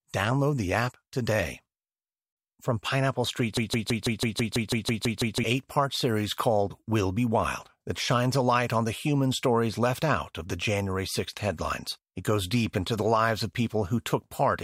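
From 3.57 to 5.44 s the speech locks into a broken-record loop: one 164 ms fragment repeats eleven times. Likely a stalled player resending its last buffer.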